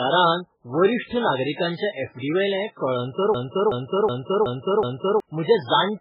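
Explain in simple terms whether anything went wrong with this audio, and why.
The whole speech clip sounds thin and watery, with nothing above about 5.2 kHz, so the crisp top end of s sounds is gone and the sound swirls. That's MP3 compression damage, most likely from very heavy squeezing. The encoder ran short of room, chopped off the treble and kept dropping faint bits of sound on and off, which gives that underwater, metallic quality.

From 3.34 to 5.20 s there's a system hang loop. The computer froze, but the sound hardware kept replaying whatever was already in its buffer. You hear the same 0.37-second snippet repeat five times, about 2.7 times a second, like a stuck stutter. That length fits a 16384-sample buffer. Meanwhile roughly two seconds of the real recording never got captured, so that part is simply missing.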